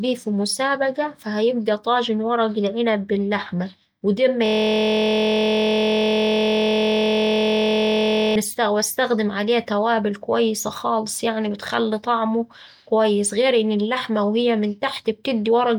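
A speech clip with a system hang loop. Just after "العنب باللحمة وده أما", at 4.46 s, the audio freezes into a steady buzz until 8.36 s. One 23.22 ms slice repeats exactly, at 43.1 Hz. That fits a 1024-sample buffer cycling while the system hung.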